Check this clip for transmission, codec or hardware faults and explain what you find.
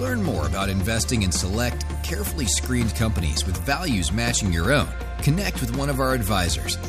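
Nothing stood out on listening that would point to a fault anywhere in the clip.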